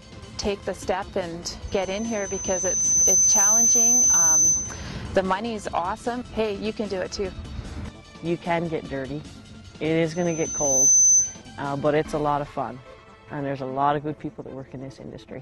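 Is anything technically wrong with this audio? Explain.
Yes. Loudspeaker feedback squeal appears from 1.67 to 4.95 s and again from 10.13 to 11.42 s. A microphone picks up its own loudspeaker, so 6.1 kHz circulates with loop gain above one. A pure tone swells over roughly 1.5 s, then under a second, reaching about 10 dB above the audio.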